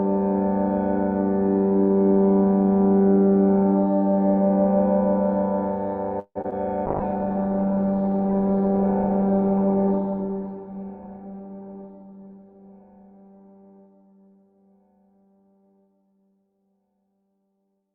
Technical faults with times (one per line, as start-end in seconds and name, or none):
6.19-6.37 call audio freeze
6.41-6.66 short concealed packet loss
6.87-16.06 call bitrate drop
11.11-11.89 jitter buffer speed-up